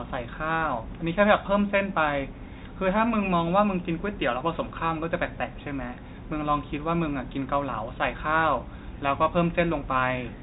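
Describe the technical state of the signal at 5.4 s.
At 5.4 s the speech is intact, carried through G.711 telephone coding that passes nothing above 3.8 kHz.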